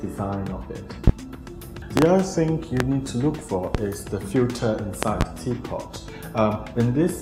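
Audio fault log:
1.08–1.11, 1.97–2.06, 2.80–2.84, 3.75–3.78 and 5.03–5.24 s, loud pop: sharp thumps about 20 to 25 dB above the sound, doubled at 1.97 and 5.03, with the sound continuing underneath. Likely voltage spikes from a plug, switch or static, shaped by the circuitry.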